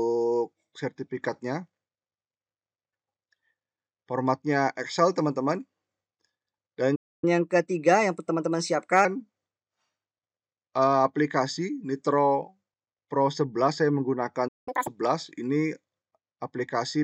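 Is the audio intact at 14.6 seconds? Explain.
No. At 14.6 seconds the output is in a playback stall running from 14.48 to 14.68 s. The player most likely ran out of buffered data or had its thread blocked, so nothing reached the output for about 189 ms. The sound cuts off in mid-flow and leaves a clear gap of silence before anything resumes.

Right after that, from 14.68 to 14.87 s, comes catch-up at higher speed. The player clears its backlog by resampling, which runs the audio at twice normal speed for that short stretch. Speed and pitch rise together, and the pitch jumps by roughly ten semitones, so the sound briefly turns hurried and squeaky.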